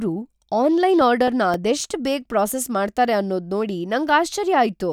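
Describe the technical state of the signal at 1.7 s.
At 1.7 s the speech carries CD scratch ticks (1.01–2.07 s): five evenly spaced ticks, the longest about 2 ms. The regular once-per-revolution rhythm marks a scratched disc rather than random clicks.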